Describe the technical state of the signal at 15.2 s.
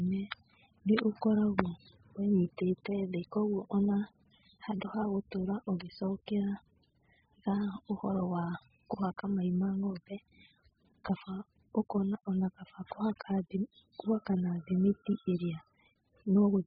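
At 15.2 s the speech carries the AAC compression damage present throughout: nothing above 5 kHz, smeared and warbling, which fits a very low bitrate near 8 kbps, likely AAC-LC.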